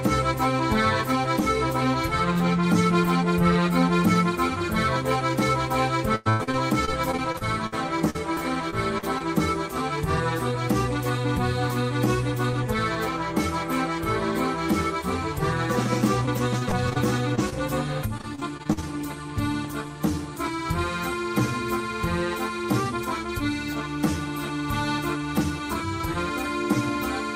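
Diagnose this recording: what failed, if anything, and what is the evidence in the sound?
Repeated packet loss (robotic sound), a network fault, at 6.15 to 7.74 s, 8.10 to 9.22 s, 16.26 to 16.97 s and 18.18 to 18.84 s. Closely spaced holes, the longest about 0.1 s, are each bridged by extending the preceding sound, giving a choppy texture with pieces missing, with up to about 28% of each stretch synthesised.

Short concealed packet loss, also at the network stage, at 17.35 to 17.40 s and 17.50 to 17.54 s. In each, about 20 ms of audio arrived too late to decode, and the receiver extrapolated from the last sound before crossfading back, leaving a brief smear or wobble.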